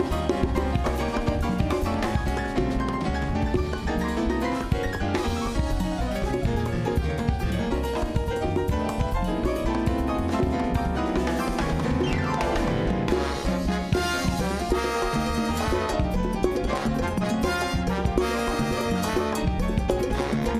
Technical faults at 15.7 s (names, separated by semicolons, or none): none